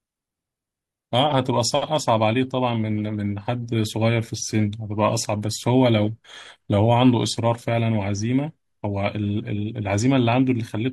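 Nothing in this speech recording reveals a technical fault. The signal holds steady throughout, with no interruption or alteration to be heard at any point.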